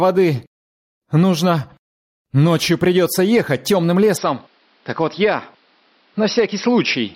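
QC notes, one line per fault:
Throughout: gain pumping. The gain ducks by around 5 dB under each loud sound, squashing loud and soft parts closer together. This is likely an input gain set too high, with a fast limiter pulling it back on every peak.
4.17 s to end: input switched to a poorer device. With no gap at the switch, the sound turns duller and narrower, with nothing above 5.7 kHz, drops around 5 dB in level, and gains a new noise floor around 45 dB down, likely from a change to another microphone or a headset call profile.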